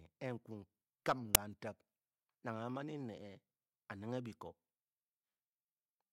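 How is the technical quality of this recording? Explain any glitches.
One glitch stands out. At 1.35 s, file tags are played as audio: embedded cover-picture data is decoded as samples, producing a hard-edged, very loud snap of white noise.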